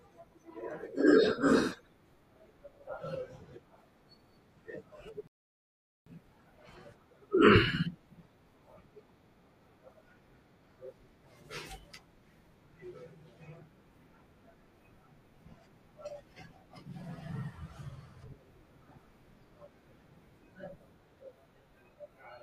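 At 5.27 s the player runs out of buffered audio, a rebuffering stall. The speech goes silent until 6.07 s, then resumes where it stopped, adding 0.79 s.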